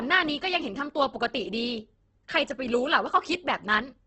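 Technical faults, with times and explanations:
Throughout, Opus compression: the speech sounds rough and grainy, with a noisy, hashy texture and nothing above about 8.2 kHz, so it comes across as dull and narrowed. This is likely heavy Opus coding in its music (CELT) mode at wideband, which fits a bitrate around 12 kbps. Short of bits, the encoder keeps each band's energy but fills the detail with folded copies of lower bands or noise, which turns the voice grainy.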